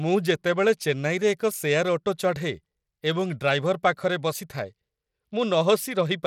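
A speech clip with Bluetooth SBC compression damage running through its whole length. The coding damage is plainly audible. A gritty, grainy noise rides on the voice, and the top end sounds thin and unsteady. Nothing is present above about 17.4 kHz. The likely cause is a low-rate SBC link, which fits a bitrate near 96 kbps. At that rate the upper sub-bands starve for bits, so the treble flickers. The coarse quantising of the remaining bands adds the grit and aliasing.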